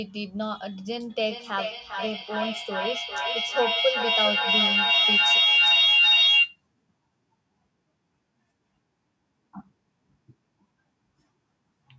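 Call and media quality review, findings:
Feedback howl, 1.10–6.61 s: tone near 3 kHz building to about 8 dB over the speech, repeating roughly every 400 ms. Two devices in one room on the call, so the mic-to-speaker loop keeps gaining until someone breaks it. Speech band topping out at 8 kHz is just the call path.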